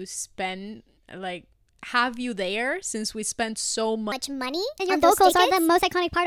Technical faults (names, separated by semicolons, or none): section at the wrong speed